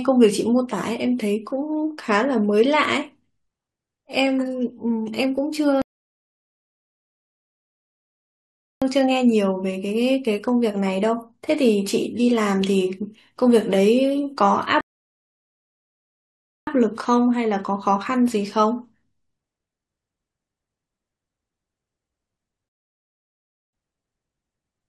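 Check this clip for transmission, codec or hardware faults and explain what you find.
The clip has one transmission fault, repeated three times. A rebuffering stall occurs at 5.82–8.82 s, 14.81–16.67 s and 22.69–23.73 s: the player's buffer ran dry, so the speech drops to silence for 3.0 s, 1.9 s and 1.0 s, then resumes exactly where it stopped, with nothing missing.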